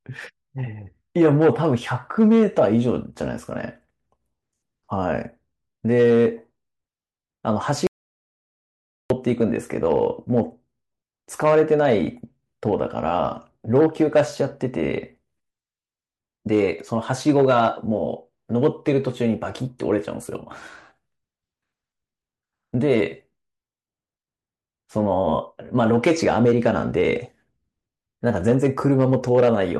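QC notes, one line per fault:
7.87 to 9.10 s, audio dropout to silence. The speech cuts off abruptly and returns mid-flow after about 1.23 s. The gap is silent with no room tone. The input was likely lost while the recorder kept writing silence.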